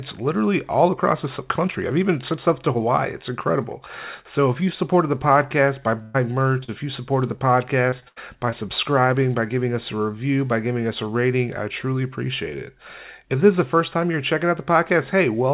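The clip is speech carried over a call link, with nothing above 4 kHz, which fits a narrowband G.711-style codec. At 6.02 to 6.16 s, right after "supported the podcast by", there is a burst of packet loss. About 120 ms of audio never arrived. The receiver stretched the last sound into a held, fading tail, and the speech then jumps ahead with that stretch missing. At 6.64 to 6.70 s, just before "if you supported the", there is a short concealed packet loss. Roughly 40 ms was lost and patched by continuing the preceding sound, then blended back. It is heard as a brief smear in the flow. From 7.90 to 8.54 s, after "if you supported the", repeated packet loss gives a robotic sound. Four separate gaps fall in that span, the longest about 80 ms. About a fifth of the stretch is concealment, and around 140 ms of speech is gone. This leaves the audio choppy, with pieces missing.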